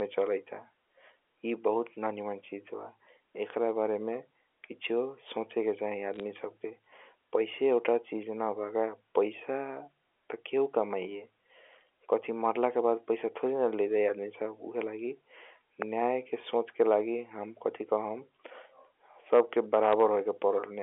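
Speech over a digital phone line, carried as A-law telephone audio whose band stops near 3.4 kHz, with bit errors on a digital phone line at two points. Between 6.14 and 6.20 s a short burst of flipped bits corrupts individual coded samples; where a sign or high-order bit is hit, the sample jumps far from its neighbours, so the voice picks up a brief patch of sharp ticks and crackle while the speech itself stays intact. A second, isolated error at 19.93 s hits a single frame. It lands inside a stretch of hard clipping from 19.33 to 20.04 s, where the signal is driven about 3 dB beyond what the stage can pass. The peaks of each loud syllable are sheared flat, adding high harmonics that come through as a gritty crackle riding on the loudest moments.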